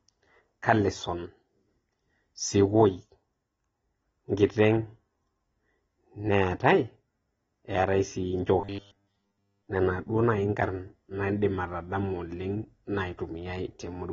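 From start to end the speech carries plainly audible AAC compression, likely AAC-LC at a low bitrate near 24 kbps. The coder discards detail, so nothing remains above 7.6 kHz, giving a dull, smeared tone with a warbling edge. On a spectrogram this appears as a hard ceiling with patchy gaps below it.

From 8.60 to 9.69 s, just before "nena duo", comes robotic sound from repeated short buffers, likely from audio arriving late. Roughly all of that stretch is replaced by a repeated 10 ms slice, imposing a rigid 100 Hz metallic buzz. The waveform shows an identical cycle repeating, and the spectrogram shows evenly spaced horizontal lines every 100 Hz.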